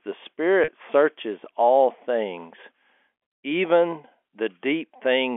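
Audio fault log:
0.64–0.68 s, packet loss with pitch repetition: about 40 ms goes missing just before "searches all things", which fits two lost packets. The receiver repeats the last pitch period, so the sound briefly holds with a slight buzz instead of dropping to silence as a plain dropout would.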